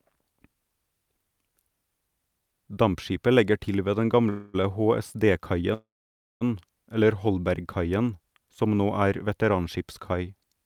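Call audio freezes at 4.29–4.56 s, after "legger til ved den", and at 5.74–6.43 s: likely delayed packets draining the jitter buffer. The speech stalls into a fading buzz, the second falling silent for about 0.55 s, then resumes with nothing lost.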